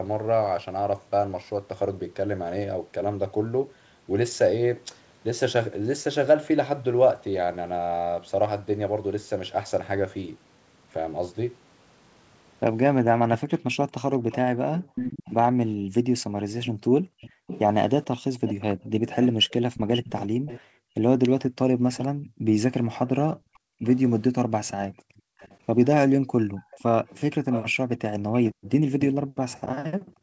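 A speech recording carries an echo leak in two stretches, 14.3 to 22.02 s and 23.87 s to the end. A delayed copy of the talker trails the original by about 454 ms in the first stretch and about 491 ms in the second. It sits roughly 10 dB below the direct speech at first and nearer 15 dB below later. The likely cause is a far-end echo canceller on a loudspeaker that failed to suppress what its microphone picked up. On a spectrogram the echo shows as weaker duplicates of each syllable's harmonic bands, shifted right by about half a second. In the waveform, small bursts fill gaps that should be quiet. The background is also gated by the echo canceller between 14.83 and 25.39 s, and again from 28.53 s to the end, with around four seconds affected in the first stretch. When the canceller clamps the microphone, the room noise drops by as much as about 40 dB and then returns. A spectrogram shows this as the grey noise floor abruptly going dark in blocks, and the waveform shows the low-level hiss collapsing to near silence. 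Across the whole spectrogram, energy stops at 8 kHz, as expected for the G.722 call path.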